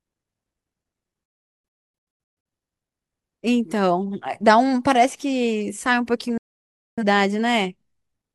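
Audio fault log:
1.26–2.46 s, digital broadcast dropout. The speech drops out in several short holes spread over about 1.2 s. About 0.98 s is lost in total, with the longest gap at 0.38 s. Each cut fades in about 3 ms. The receiver muted whenever frames arrived bad or missing, so the audio sent meanwhile is lost.
6.38–7.03 s, digital broadcast dropout. The speech goes silent for 0.6 s after the same 3 ms fade. The content in the gap is lost.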